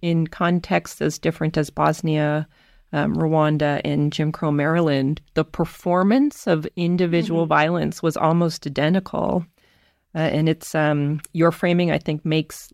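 Speech recording, no technical faults.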